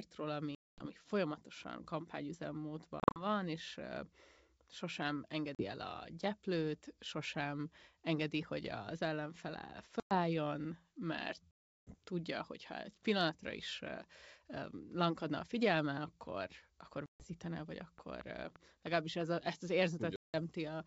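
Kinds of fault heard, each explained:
Packet loss on an ADPCM call: chunks of the speech stream go missing and are filled with hard-edged silence, after which the decoder's adaptive predictor has drifted, so the sound comes back with brief, slight distortion. Holes run from 40 ms to 360 ms, the longest near 11.5 s; unlike clicks, each leaves a gap.
Train of clicks: about seven sharp, similar pulses between 17.81 and 19.22 s, around 4 per second at uneven spacing and about 10 dB above the speech, likely from electrical interference or a faulty connection. Nothing drops out, and they tick over the speech and the pauses alike.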